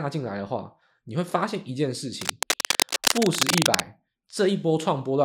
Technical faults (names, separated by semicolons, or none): cable scratch noise